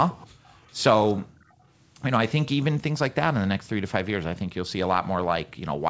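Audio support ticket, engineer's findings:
Echo leak: faint delayed repeat of the speech at 0.18–0.27 s, 0.45–0.78 s and 1.41–1.53 s, always 362 ms behind the original and roughly 25 to 40 dB down. Likely far-end loudspeaker pickup the echo canceller missed. The fixed lag marks it as a discrete copy rather than room reverb, which would trail off smoothly.

Background gated by the echo canceller: room noise floor collapses by about 40 dB at 0.33–0.45 s (around a tenth of a second) and at 1.22–1.57 s (about a third of a second), then recovers. The canceller's suppressor is clamping the mic during playback.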